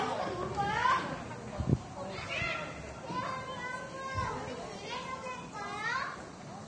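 An everyday sound recording carries heavy Vorbis compression damage across its whole length, most likely from encoding at a low bitrate around 30 kbps. Nothing remains above 10.6 kHz, and the treble just below that cut-off is hissy and grainy, with attacks smeared and tones roughened. What separates this from a simple low-pass filter is that the remaining highs are replaced by noise of similar energy rather than cleanly removed.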